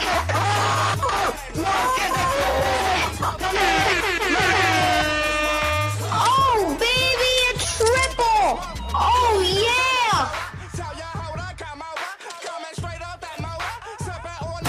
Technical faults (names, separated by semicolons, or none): skip ahead; jitter buffer speed-up